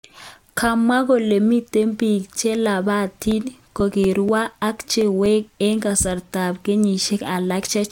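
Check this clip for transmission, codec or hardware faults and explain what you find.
One fault is present: CD scratch ticks. From 3.31 to 5.74 s, eleven regular ticks interrupt the speech, about four or five per second. Each is brief, the longest under ten milliseconds. A disc blemish defeats error correction once per revolution, so the player patches or mutes those samples.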